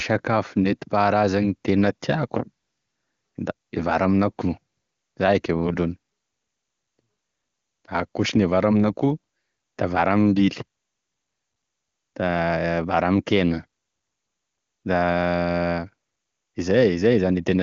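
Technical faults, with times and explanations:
Nothing to flag here; the speech comes through an AMR wideband (HD Voice) path at its top rate of 23.85 kbit/s, with the sound stopping a little above 7 kHz, as that codec's band limit would have it.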